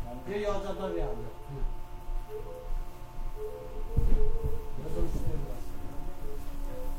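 No technical faults can be heard in this recording.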